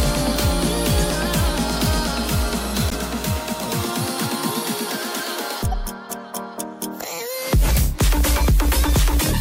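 At 2.90 to 2.95 s and again at 5.72 to 5.74 s a corrupt frame was decoded. Damaged bits in the compressed stream were played back as if valid, so misread gains and codes placed energy at the wrong frequencies for roughly a couple of frames each time. Both are heard as short, abrupt chirp-like bursts unrelated to the surrounding sound. The first is louder, peaking near -10 dBFS, and the second is a little quieter.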